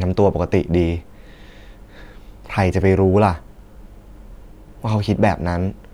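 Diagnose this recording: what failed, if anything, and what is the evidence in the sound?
Nothing failed in this recording, and the sound offers no evidence of a fault at any stage.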